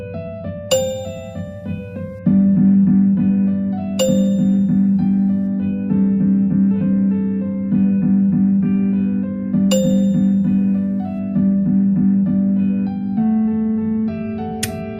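No technical faults are audible anywhere in the audio.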